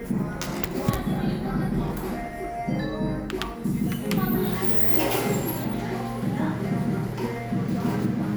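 A recording of sounds. From 3.64 to 5.64 s, pre-emphasis is left on. Treble rises about 8 dB at 10 kHz, matching the CD 50/15 µs curve, sounding thin and bright.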